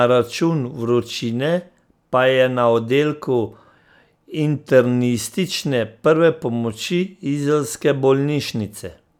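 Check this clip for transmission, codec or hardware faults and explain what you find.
No faults found anywhere in the speech; nothing to flag.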